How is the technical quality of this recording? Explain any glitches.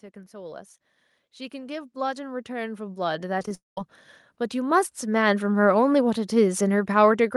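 The recording has three glitches: a slow level rise through most of the speech, a robotic stutter, and a brief drop to silence just after it.

From 0.13 to 5.49 s, automatic gain rising lifts voice and background together by about 19 dB. It is a gradual swell, not a sudden step in level.

Between 3.39 and 3.51 s, repeated packet loss gives choppy, robotic speech. Four short holes, the longest 11 ms, are patched by repeating the preceding sound, unlike one sustained gap.

From 3.55 to 3.78 s, the sound smears into a fading buzz and then about 160 ms of silence before speech resumes. This is likely a long network dropout, and the missing speech never returns.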